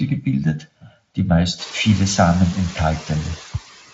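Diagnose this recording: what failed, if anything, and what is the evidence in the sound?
A hollow, phasey colour runs throughout, with fixed notches from around 400 Hz upward: channel delay (comb filtering). One channel arrives roughly 1.5 ms late and is summed to mono.

The background sinks about 12 dB between phrases and swells back under speech. These are noise suppressor artifacts from call processing.

Between 0.60 and 0.92 s, parts of the speech turn faint and swallowed, dropping up to about 15 dB. This is speech cut by the noise suppressor, which mistook soft speech for noise.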